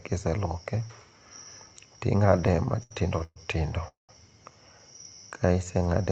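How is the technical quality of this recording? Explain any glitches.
The recording has three timing glitches in the speech, all of them delays rather than lost audio. It comes through a band-limited call path that stops at about 8 kHz.

From 2.31 to 3.38 s there are repeated stalls (stutter). The speech catches and drags twelve times, with the longest hold about 123 ms. Packets kept arriving late, so the jitter buffer ran dry and the receiver stretched the last sound forward. That concealment fills roughly 305 ms, close to a third of that stretch.

From 3.88 to 4.11 s comes a call audio freeze. The sound briefly continues as a fading fill, then drops to about 150 ms of silence before resuming where it left off. The likely cause is packets held up in transit, emptying the buffer and inserting a gap of about 208 ms.

From 4.91 to 6.07 s there is a jitter buffer slow-down. The speech runs slower, at about 85% speed, with drawn-out sounds while the pitch stays unchanged. 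The buffer was rebuilding its reserve by repeating single pitch periods and bits of pauses, adding about 179 ms.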